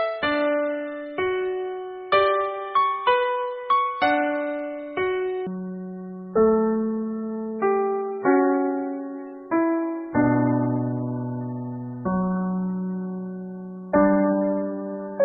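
From 5.47 s to the end at 15.25 s, a section at the wrong speed plays at 0.5x, likely from being clocked at half the correct rate. Timing stretches to double length and pitch drops about ten semitones, so the sound turns deep and sluggish.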